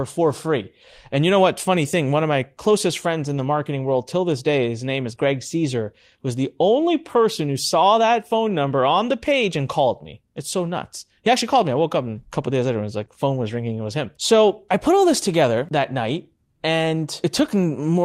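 Speech with lost packets rebuilt from error correction at 3.37–3.39 s (after "my closest friends in"), 6.73–6.75 s, 7.79–7.81 s, 13.01–13.03 s, 13.09–13.11 s and 15.65–15.67 s. Each 20 ms frame, which fits a single lost packet, was replaced by a low-bitrate copy, so there is no gap, only a rough, noisier sliver that shows as a fuzzier vertical strip on a spectrogram. Short concealed packet loss at 5.15–5.19 s and 13.05–13.09 s filled 20 ms holes by extending the preceding sound, heard as a brief smear.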